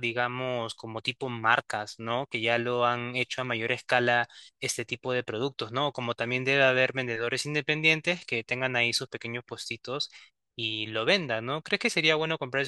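No technical faults can be heard in this recording.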